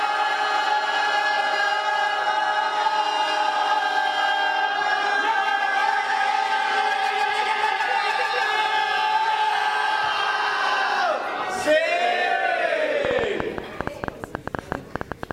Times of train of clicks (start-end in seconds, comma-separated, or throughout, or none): 13.05-15.32